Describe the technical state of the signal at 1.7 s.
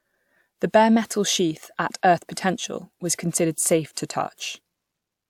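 At 1.7 s the speech signal is intact, with no audible fault at that moment.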